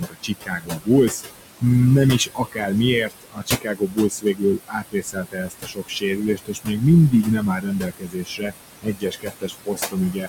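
Throughout the recording, a noise suppressor treats steady background as noise and pulls it down by about 19 dB, band by band and frame by frame. The room noise, which sits about 10 dB below the speech, sinks in the pauses and swells back under each phrase.

The same suppressor also mistakes parts of the speech for noise and turns them down along with the background. This happens from 0.0 to 0.89 s, with drops of about 20 dB across roughly 0.7 s of sound. It recurs from 2.19 to 2.7 s, about 15 dB over roughly 0.3 s, and from 3.05 to 6.82 s, about 21 dB over some 2 s. It returns from 7.11 to 8.53 s at about 21 dB and from 8.82 s to the end at about 22 dB. In these stretches soft consonants and word endings sound swallowed or faint.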